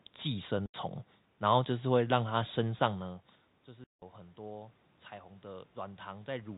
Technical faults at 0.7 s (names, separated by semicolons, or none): packet loss filled with silence